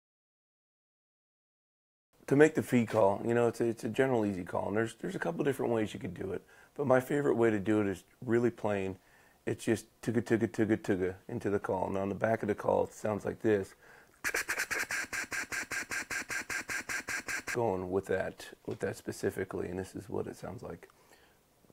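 From 15.17 s to 17.54 s the audio falls into a broken-record loop: a fragment about 196 ms long plays back to back 12 times, identical each pass, before normal sound resumes. Whatever should have played in those 2.4 seconds is lost. The likely cause is a stalled player, encoder or stream that kept resending the last fragment it held. Unlike an echo, the repeats don't fade or overlap; unlike a dropout, nothing goes silent.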